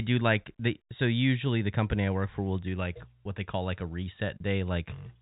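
No faults are audible anywhere in this speech clip.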